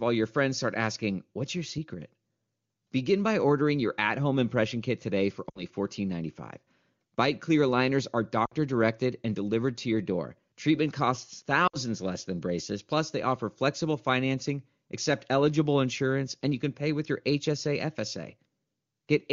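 A speech clip over the AMR wideband (HD Voice) codec, where lost AMR speech frames occur at 5.49 to 5.63 s, 8.45 to 8.53 s and 11.67 to 11.77 s. Radio errors corrupted short runs of frames, about 60 ms each, which fits three 20 ms frames, and the decoder filled each gap by repeating the last good pitch and vocal tract settings at falling gain. Each gap sounds like a quick drop to near silence within two frames before the speech briefly returns weak or rough.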